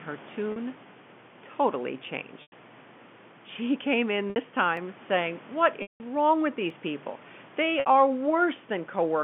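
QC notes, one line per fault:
0.52 to 7.86 s, packet loss with pitch repetition: gaps at 0.52 s (40 ms), 2.42 s (100 ms), 4.30 s after "came in" (60 ms), 5.82 s (180 ms, just before "wrong with") and 7.80 s (60 ms). The last pitch period is looped and faded, so short gaps sound like a held buzzy tone, while the 100 ms and 180 ms gaps fade to silence before the speech cross-fades back.
4.77 s and 6.70 s (just after "wrong with"), dropped samples: single sharp clicks, each likely from less than a millisecond of samples missing, so the waveform jumps abruptly without any audible loss of sound.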